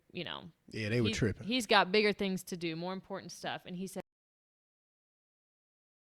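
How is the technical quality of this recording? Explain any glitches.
The recording has one clear fault. At 4.00 s the speech cuts out mid-flow and never returns. This is an audio dropout to silence. The input signal was likely lost, through a disconnected device, failed link or stray mute, while the recorder kept writing silence. The gap is silent. No room tone remains.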